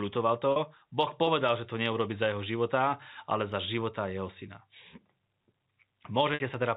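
Speech over G.711 telephone coding, band-limited below 4 kHz, with a brief held, buzzy moment at 0.52 s and a held sound fading into silence at 6.34 s. This is packet loss with pitch repetition, where 40 ms and 60 ms gaps were bridged by repeating the last pitch period.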